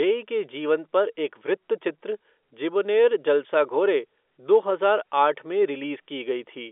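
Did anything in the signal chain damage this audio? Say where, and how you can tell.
No, nothing in the chain damaged this speech; it's simply carried over G.711 A-law telephone coding, so the sound sits in the usual narrow phone band with nothing above about 3.7 kHz, which is just how that line format works.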